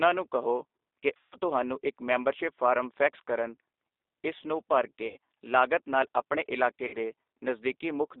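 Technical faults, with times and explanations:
Throughout: G.729 codec. The speech has been squeezed through an 8 kbit/s G.729A coder, and the line band runs only from 300 Hz to 3.7 kHz, so it sounds thin and boxy with no air above that. The damage is plainly audible. Each 10 ms frame is rebuilt from a vocal tract filter, a pitch predictor and a handful of pulses, which leaves voiced sounds slightly rough and synthetic.
1.17–1.36 s, 5.07–5.17 s, 6.87–6.96 s: VoIP packet loss concealed by the speech codec. The three dropouts last about 150 ms, 90 ms and 60 ms. The first ends just before "ਤੁਹਾਨੂੰ ਇੱਕ ਮੈਂਬਰਸ਼ਿਪ ਫਾਰਮ". The second follows "ਇਸ ਨੂੰ ਭਰ" and the third follows "ਨਾਲ ਆਪਣੇ". In each gap the decoder keeps repeating its last pitch and filter at falling gain, so the sound smears into a fading buzzy tone or coloured noise rather than silence. The decoder's state builds from frame to frame, so the speech stays weak or distorted briefly after each gap before it recovers.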